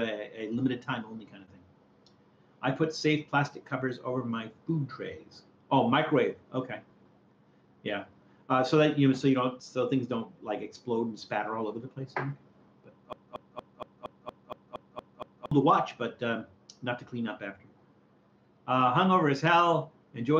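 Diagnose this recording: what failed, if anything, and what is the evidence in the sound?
From 13.13 s to 15.51 s a single fragment of about 233 ms repeats exactly, back to back, ten times: a broken-record loop. The likely cause is a stalled buffer in the player or stream that kept resending the last block it held, so the audio due in those 2.4 seconds is simply gone. On a waveform the envelope tiles identically every 233 ms, and a spectrogram shows the same patch copied across in a vertically striped grid.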